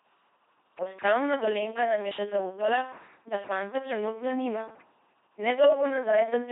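Throughout, the speech carries LPC-10 vocoder damage: heavy, buzzing and robotic, consistent with a 2.4 kbit/s stream, with each frame forced fully voiced or unvoiced and nothing above 3.8 kHz.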